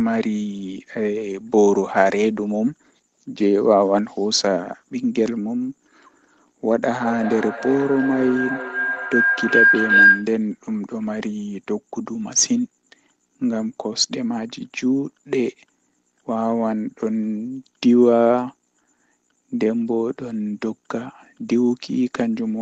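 From 6.84 to 10.41 s, a feedback howl builds. A microphone and loudspeaker share a loop, and each pass adds level. The tone narrows to around 1.5 kHz, pulsing roughly every 0.4 s, and peaks at about 4 dB above the speech.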